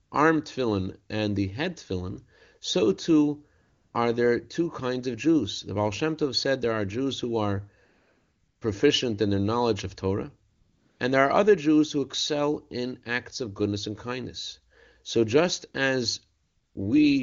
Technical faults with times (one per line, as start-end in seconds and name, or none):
0.03-0.11 AMR comfort noise
3.61-3.93 AMR comfort noise
7.85-8.61 AMR comfort noise
10.49-10.99 AMR comfort noise
16.43-16.75 AMR comfort noise